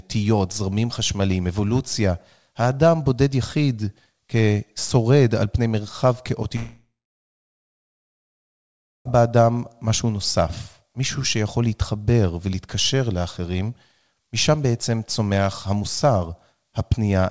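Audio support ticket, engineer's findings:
Speech cuts out at 6.56 s. A short fading buzz carries the last sound, then near-silence until 9.07 s, with about 2.2 s of it dead quiet. Audio resumes mid-flow with roughly 2.5 s of material gone. Long network dropout, likely sustained packet loss on the call path. The receiver's concealment stretched the final frames, let them decay to silence, then restarted on new packets without the lost span. Nothing above 8 kHz, consistent with G.722 at 64 kbps.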